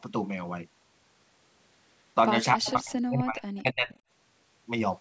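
Between 2.54 and 3.43 s the speech sinks by about 30 dB, then dips about 20 dB from 3.6 to 3.93 s. This is likely speech suppressed in double talk.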